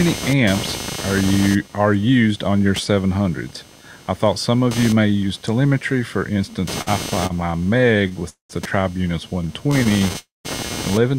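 Speech with several network-delivery faults on top of a constant electrical noise. Computer activity noise runs through all 11 seconds: a buzz pulsing roughly 200 times a second, roughly 15 dB below the speech. It rises and falls with the computer's load rather than with the talking, so the machine's shifting current draw is disturbing the audio ground. On a spectrogram it appears as evenly spaced horizontal harmonic lines about 200 Hz apart, continuing through pauses where the speech energy drops away. Repeated stalls (stutter) break up 6.81 to 8.23 s with sixteen short holds, about 259 ms of filled-in sound in total and the longest near 50 ms, covering 18% of that stretch. A milder run from 9.72 to 10.16 s has six holds totalling 70 ms, none longer than about 17 ms, covering 16%. Each hold stretches the last sound while late audio catches up, so the speech drags and judders but nothing is lost. 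In the waveform these show as brief smeared or repeated segments breaking the normal envelope. A call audio freeze follows at 8.29 to 8.51 s, where about 202 ms is bridged, including 130 ms that falls to silence. A second freeze at 10.18 to 10.47 s bridges about 263 ms, 180 ms of it silent. Both are likely transit delays that emptied the jitter buffer. The receiver extended the last sound into a fading tail, then resumed where it stopped. Spectrogram and waveform show a smeared fade into a blank gap before the speech picks up again. A jitter buffer slow-down spans 9.42 to 10.01 s. The receiver repeated single pitch periods to rebuild its reserve, adding about 60 ms so the speech runs at 91% speed with its pitch unchanged. Vowels sound drawn out. On a waveform, runs of near-identical repeated cycles are visible, and on a spectrogram the harmonics are stretched horizontally without shifting in frequency.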